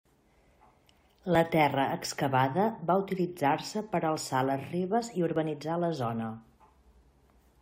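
At 1.35 s there's a tiny skip in the speech, and the same thing happens again at 5.36 s, right after "alçar les ribes i" and just before "la zona". That's an overlap between stream segments: neighbouring chunks claimed a few milliseconds of the same time, so the player trimmed off audio that was never actually duplicated. Under 20 ms goes missing each time, and the waveform jumps. The two land about 4 s apart, matching the segment length.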